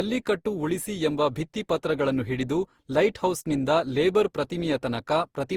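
From start to finish the speech carries generation loss: a swirly, hollow smear with softened consonant attacks. It is likely the result of repeated lossy coding, around seven passes of Opus at a rate that fits 48 kbit/s. Each re-encode quantised on a shifted frame grid, so errors piled up. A single low-bitrate encode would instead dull the top end, yet content still reaches about 20.1 kHz here while the texture stays watery and phasey.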